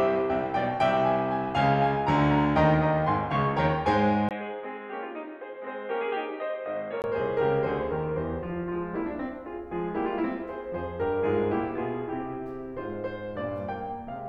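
From 4.29 s to 7.04 s the music turns dull and boxy, with nothing above 4.1 kHz, a level a few decibels lower, a faint new noise floor, and a brief gap at the switch. This is likely an input switched to a poorer device.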